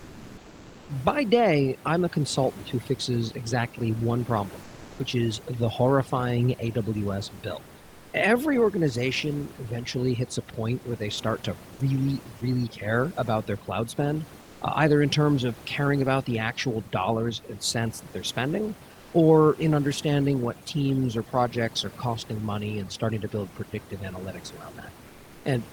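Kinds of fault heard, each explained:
Overdone noise removal: Throughout the clip the gaps between phrases fall to near silence dotted with faint twinkling specks. A noise reduction stage is set too hard. It pushes individual frequency bands down or off whenever they sit close to its estimate of the room noise, which lies about 23 dB below the speech. Quieter parts of the voice are stripped out along with that noise.
Comfort noise in place of the background: From the start to 0.87 s, and again from 4.63 to 4.99 s between "fixes exactly one problem" and "is the horrifying", the real background gives way to a steady, featureless hiss. In the opening stretch its level shifts by about 2 dB, and in the later one it sits at the same level. The likely cause is discontinuous transmission in an Opus-style codec. The sender stops sending during pauses, and the receiver fills the gap with synthetic noise shaped roughly like the background.
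Sound dropped by the voice detector: At 11.75 s, between "where they start to" and "really care about their", about 40 ms of speech vanishes into flat noise before the voice returns. The sender's voice activity detector likely judged that brief stretch of sound to be background and stopped transmitting. The receiver then filled the short gap with comfort noise, so a small piece of the speech is simply missing rather than distorted.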